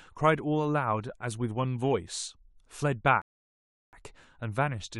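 At 3.22 s the player runs out of downloaded audio and halts playback, a rebuffering stall. The speech drops into silence until 3.93 s, then picks up exactly where it broke off, with nothing missing but about 0.71 s of dead air inserted.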